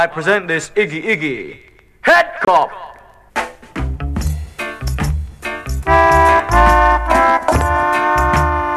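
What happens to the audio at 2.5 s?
Right around there you get a digital broadcast dropout, from about 2.45 to 2.48 s. The receiver hit a frame it couldn't decode, probably one that failed its checksum, and muted instead of playing garbage. The audio ducks out with a quick fade of about 3 ms, leaves a hole of roughly 24 ms, which fits a single lost frame, then picks up later in the programme. Whatever was in that gap is gone.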